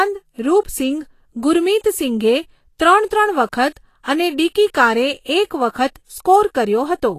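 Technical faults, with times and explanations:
Throughout: Vorbis compression. The speech has a plainly audible hissy, grainy quality in the upper range, with consonant onsets smeared and the tonal parts of the sound roughened. Nothing is present above about 14.2 kHz. This fits lossy coding at a low rate, likely Vorbis at around 35 kbps, where the encoder trims the top band and quantises the remaining treble so coarsely that its fine structure is replaced by noise of similar energy.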